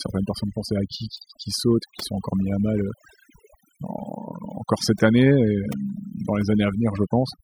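Overdone noise removal runs through the whole of this speech clip. A noise reduction stage was pushed far too hard on a noisy recording, so any frequency band sitting close to its noise estimate is dragged down or switched off. Quieter parts of the voice fall below that line and vanish with the noise. Between phrases the background drops to near silence scattered with twinkling specks.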